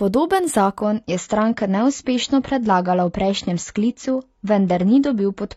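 At 0.82 s the speech suddenly loses its treble, with nothing above 7.5 kHz until the end. This is an adaptive stream at a lower bitrate. The connection slowed, so playback switched versions without a gap. Codec artefacts rise, which fits a drop from 96 to 24 kbit/s.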